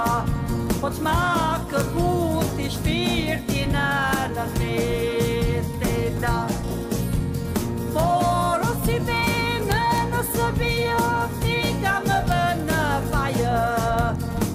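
Integer overflow at 9.72 to 9.98 s, 12.32 s and 13.99 s: loud peaks exceed the integer limit and wrap to the opposite sign, producing violent cracks sharper than clipping.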